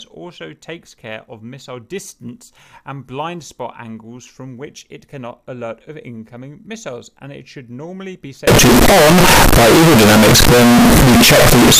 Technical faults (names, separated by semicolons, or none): float read as integer